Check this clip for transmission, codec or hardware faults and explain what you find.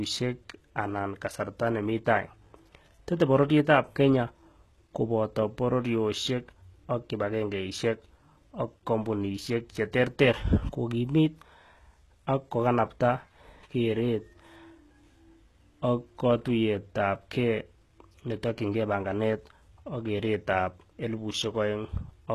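There's one fault, and it runs through the whole clip. Nothing comes through above 12.3 kHz, and the s sounds are gritty and a bit metallic, almost lispy. That's likely HE-AAC compression at a low bitrate, something around 16 kbps, where the treble isn't coded but rebuilt by copying lower bands upward. Its harmonics don't line up with the real ones.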